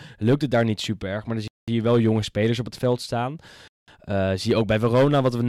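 At 1.48 s the speech drops into a clean silence for 200 ms, then picks up again on "je wel jonge spelers". That's a gap between chunks. The audio seems to arrive in blocks about 2 s long, and each join leaves a hard-edged hole instead of running straight through. Nothing goes missing, it just pauses. The same thing happens at 3.68 s, right after "op het veld staan", with another 200 ms dropout. That spacing is what gives away the chunk boundary.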